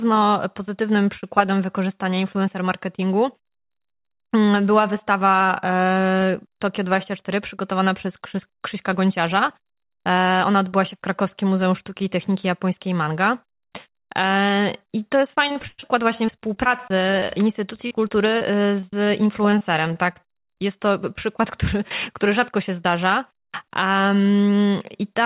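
Right after "I to jest", from 15.48 to 20.17 s, packets were repeatedly lost or late, each hole patched by extending the previous sound. This repeated packet loss (robotic sound) leaves choppy speech with dozens of short gaps, the longest 111 ms.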